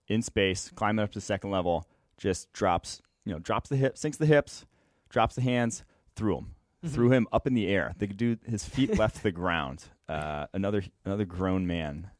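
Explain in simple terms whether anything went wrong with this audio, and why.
Nothing went wrong that I could hear: listening through the whole recording, nothing stood out as a technical fault at any point.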